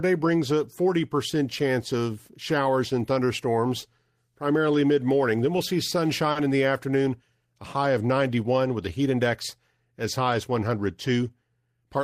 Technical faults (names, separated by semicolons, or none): short stall from a late packet; jitter buffer speed-up